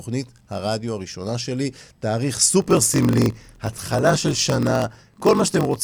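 Block size mismatch (padded) from 2.6 s: short blocks zero-filled to fit 1024-sample reads leave a 46.9 Hz buzz and slow speech to 0.938 speed, timbre unchanged.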